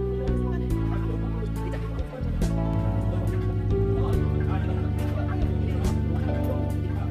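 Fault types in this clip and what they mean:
Mains hum: A steady 50 Hz tone with low harmonics enters at 2.74 s and runs to the end, roughly as loud as the wanted sound, from power-line coupling.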